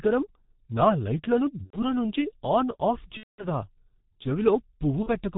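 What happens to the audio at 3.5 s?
Just before 3.5 s, packets went missing from 3.17 to 3.48 s, right after "నుంచి ఆన్ ఆఫ్". This is VoIP packet loss concealed by the speech codec. The 210 ms gap, which fits about seven 30 ms frames, was filled by extrapolating the last pitch and filter with falling gain. The speech stretches into a fading buzzy tone or coloured noise, and the voice stays weak as it recovers around 3.5 s.

Throughout the clip, the G.723.1 codec at 6.3 kbit/s cuts everything above 4 kHz and updates its voice model only slowly. It damages the speech heavily, leaving it muffled and hoarse with smeared consonants.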